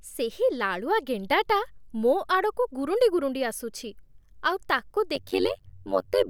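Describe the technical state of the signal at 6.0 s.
At 6.0 s the signal is inside an overlap-add ripple that runs from 5.15 s, just after "ଆଉ ତାକୁ", to the end of the clip. The speech was split into windowed frames and rejoined with overlaps whose gains don't sum to a constant, so the level swings by about 60 dB once per frame, around a hundred times a second. The result is a harsh, metallic buzz with extra tones over the speech.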